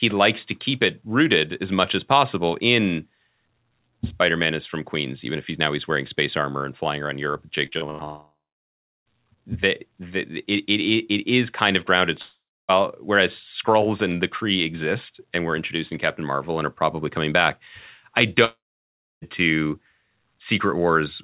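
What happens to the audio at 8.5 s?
At 8.5 s the audio sits inside a gap from 8.04 to 9.08 s. The last sound carries on as a fading buzz, then about 0.71 s of near-silence, likely a long network dropout with packet-loss concealment. The waveform flattens, and the spectrogram goes blank below its 4 kHz ceiling.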